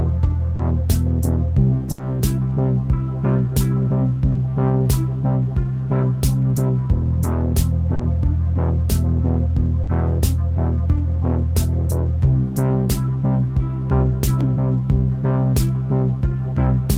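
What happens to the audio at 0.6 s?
At 0.55 to 0.62 s there is a short concealed packet loss: about 40 ms of audio arrived too late for the decoder, so the receiver extrapolated the preceding sound to fill the gap and then cross-faded back, leaving a brief smear or wobble.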